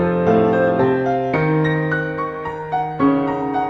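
A call bitrate drop begins at 2.32 s and lasts to the end of the clip. The connection's bandwidth estimate fell, so the encoder was pushed from about 128 kbps down to 27 kbps, bottoming out for about a second. With so few bits it codes more coarsely and narrows the band from 20 kHz to 12 kHz, so the sound loses its top-end air and turns rougher and watery.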